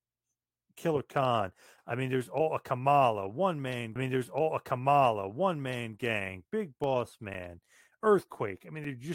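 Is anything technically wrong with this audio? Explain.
Yes, there are two separate problems in this speech clip.

From 3.95 to 5.95 s you get a stream segment repeated: about 2 s of audio plays a second time. The player fetched or queued the same chunk twice, so playback jumps back and runs that stretch again. You'll catch a small blip at the jump point, and then the same speech comes round again, which makes the timeline feel like it stuttered backwards.

Then from 6.84 to 8.85 s there are periodic USB or driver dropouts, spaced every 0.5 s, about five in all. Something is briefly stalling the USB bus or the audio driver on a fixed schedule, and each stall blanks out a tiny slice, around 2 ms, replaced with silence. That's too short to hear as a gap, so it comes across as a steady run of little ticks or pops riding on the speech.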